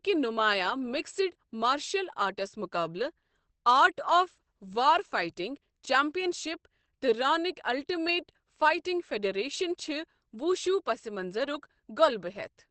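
Across the whole recording the speech sounds muffled and hoarse, with plainly audible codec damage and nothing above about 8.5 kHz, so the top end of sibilants and breath is missing. This points to Opus compression, likely with the encoder in its SILK speech mode at wideband bandwidth. That mode models the voice rather than coding every band, trading clarity for efficiency. The damage fits a low bitrate around 16 kbps.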